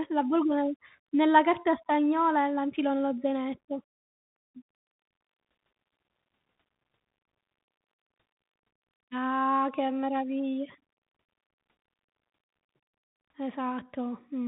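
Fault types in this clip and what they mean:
Bluetooth CVSD headset codec: the speech passes through a one-bit adaptive delta modulator, so nothing above 3.8 kHz survives. Unlike a clean low-pass filter, the damage is plainly audible as grainy hiss and rough, scratchy sibilants, which fits a 64 kbps CVSD link.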